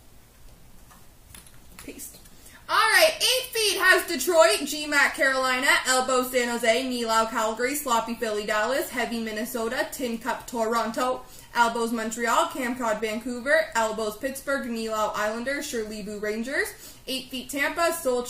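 No technical faults can be heard anywhere in the audio.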